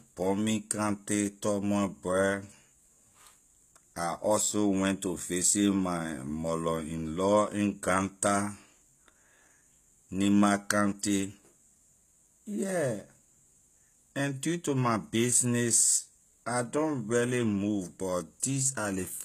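Speech, and the HE-AAC compression damage is plainly audible all the way through: the top end sounds synthetic, with s sounds going gritty and metallic, and nothing at all above about 14.9 kHz. That's likely treble rebuilt by band replication, fitting a very low bitrate around 20 kbps.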